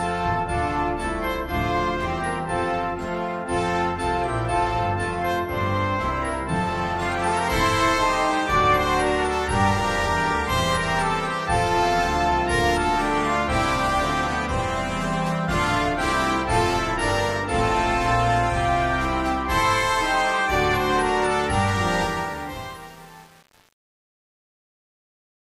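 From 22.03 s to the end at 25.56 s, the fade-out shows truncation distortion. The level ramp was applied in a stage that kept too few bits and added no dither, and the grain is consistent with a word length of around 7 bits. As the signal shrinks toward the smallest step, the waveform collapses into coarse square steps. The tail turns gritty, and the distortion is at its worst from 22.03 s onward.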